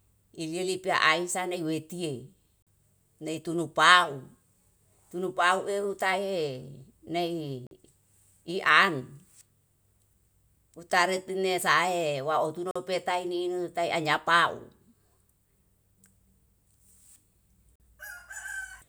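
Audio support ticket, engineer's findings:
Gap between chunks at four points: 2.62–2.67 s, just before "nai turu"; 7.67–7.71 s; 12.71–12.76 s, just before "tae ninu tae"; 17.76–17.80 s. Each is a 44 ms silent hole, one every 5 s. Probable component is the chunked delivery or playback stage. The speech arrives in 5 s blocks, and silence lands at each join, from padding or a late chunk start. Nothing is dropped. The flow is only interrupted.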